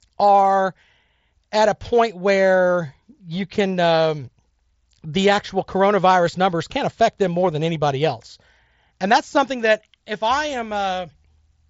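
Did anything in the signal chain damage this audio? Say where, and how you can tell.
No, the speech has simply passed through a Bluetooth mSBC headset link operating as designed, with the band stopping at about 7.7 kHz as that wideband codec does, at a bitrate of around 61 kbps.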